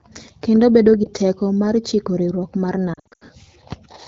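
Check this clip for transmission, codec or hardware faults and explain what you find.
Lost AMR speech frames occur twice. From 1.04 to 1.09 s, a brief dip or warble suggests a single dropped 20 ms frame. From 2.93 to 3.24 s, about 220 ms of sound is lost in scattered gaps, the longest about 80 ms. There the decoder stretches the last good frame with falling gain, so the sound drops to near silence within two frames, then returns weak or rough. Light AMR wideband (HD Voice) coding colours the whole clip.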